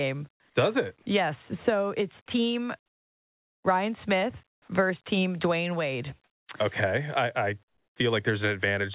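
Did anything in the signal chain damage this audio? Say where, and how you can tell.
Yes. In the pauses at 4.52 to 4.68 s, 6.24 to 6.48 s and 7.68 to 7.96 s, the real background gives way to a flat, textureless hiss: about 6 dB quieter in the first gap, about 17 dB louder in the second, and about 11 dB quieter in the third. This is comfort noise in place of the background, likely from discontinuous transmission in the call processing. The sender stopped sending audio during silence, and the receiver filled each gap with generated noise whose level did not match the room. The call audio, limited to 4 kHz, fits a G.711 telephone-band path.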